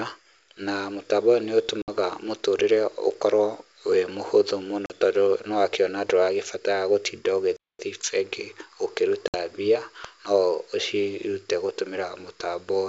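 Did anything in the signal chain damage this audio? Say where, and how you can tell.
Yes. The network stage dropped audio three times, which shows up as packet loss on an ADPCM call. Hard-edged holes sit at 1.82 to 1.90 s after "na mũtambo ũyũ nĩ", at 4.86 to 4.92 s between "wĩ mũhũthũ" and "tondũ nĩ wakiona", and at 9.28 to 9.35 s. About 60, 40 and 60 ms are missing, a few packets each time. The gaps were filled with silence. The decoder's predictor and step size then no longer match the sender's. So speech comes back slightly distorted. It settles within tens of milliseconds. The G.722 wideband coding underneath is intact.

The analogue wiring picked up an electrical switching spike twice. The first is from 3.11 to 3.13 s. The second is at 10.05 s, just before "no ũcirute gũtũmira". Both sit on top of the speech and do not replace it. That points to a short arc from a nearby switch or discharge coupling into the line, likely a switching transient.

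Playback stalled once, from 7.57 to 7.79 s. The sound stops mid-flow for about 227 ms, then resumes. This is too long for a lost packet and has no decoder recovery artefacts after it. That is the signature of an output that was likely starved of data, or whose thread was blocked, until it caught up.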